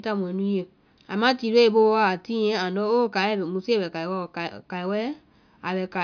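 No audible technical faults in the speech recording; nothing to flag at any point.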